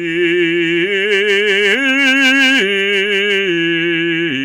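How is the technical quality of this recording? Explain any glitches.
The music is hard clipped throughout. The signal runs about 6 dB hotter than the stage can pass, so its peaks are cut flat. Around one percent of the audio hits that ceiling. The squared tops add high harmonics, heard as crackle on the loudest moments.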